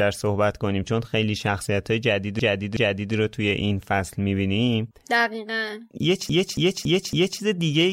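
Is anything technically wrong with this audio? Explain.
Yes. This speech has repeated frames. From 2.39 to 3.14 s, a 0.37 s block plays twice more. From 6.30 to 7.41 s, a 0.28 s block loops four extra times. Compressed frames were written more than once, so the decoder replays them. Each is heard as a stutter, adding about 0.74 s and 1.11 s.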